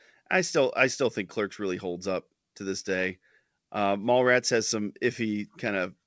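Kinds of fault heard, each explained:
None heard: the speech comes over a G.722 wideband call path, with nothing above 8 kHz, as expected for that codec.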